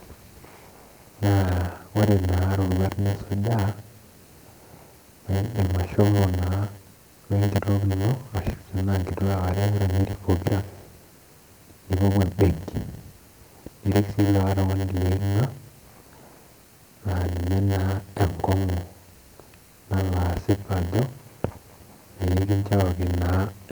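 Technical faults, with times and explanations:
Throughout, block size mismatch (padded): each block ends in a short silent gap. This causes a 100 Hz buzz. Speech plays at 0.919 speed, normal timbre.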